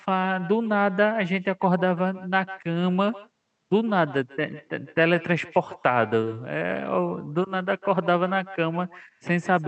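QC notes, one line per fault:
Throughout, echo with no canceller: speech returns about 19 dB down, roughly 150 ms late, off a far-end loudspeaker, a thin shadow.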